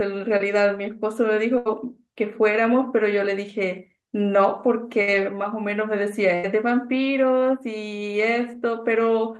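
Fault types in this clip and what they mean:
Short concealed packet loss: Around 0.37 to 0.42 s, roughly 20 ms of audio never arrived in time, and the receiver papered over it by stretching the last bit of sound before blending back in. You hear it as a quick smear or wobble.
Burst of packet loss: Three longer dropouts, at 1.58 s (about 80 ms), 5.01 s (about 60 ms) and 6.35 s (about 80 ms). Each time the receiver carries the previous sound forward and fades it, then jumps ahead, so a chunk of the speech is simply gone.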